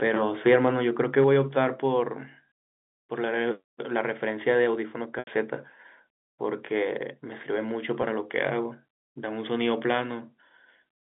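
From 0.46 to 0.69 s the loudest syllables take on a harsh, crackling edge. This is microphone overload: peaks run about 3 dB past the converter's limit and their tops are flattened, with a small fraction of samples clipped. The likely cause is an input volume set too high. At 1.22 to 1.24 s the same brittle crackle returns more briefly. The overshoot is only about 1 dB, but a few percent of samples in that stretch are cut.

At 1.02 s, and again at 1.24 s right after the second burst of distortion, the whole sound, voice and background together, drops abruptly by about 2 dB. These are microphone volume step-downs: the input level falls in a single jump rather than a smooth fade. The likely cause is the call software reacting to the overloaded peaks by pulling the device's input volume down one notch at a time.

At 5.19 s the speech briefly freezes into a held, buzzy tone that fades into silence, then resumes with a short cross-fade at 5.27 s. 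This is packet loss with pitch repetition: 80 ms of audio went missing, which fits eight 10 ms packets. The receiver filled the gap by repeating the last pitch cycle before letting it die away. At 8.02 s a single 10 ms loss leaves only a slight sustained buzz. The telephone-band G.711 sound, limited to roughly 200 Hz to 3.6 kHz, stays in place throughout.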